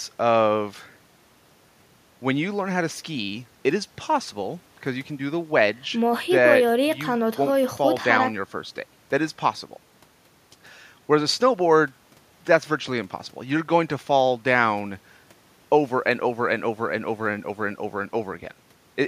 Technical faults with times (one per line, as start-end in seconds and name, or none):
none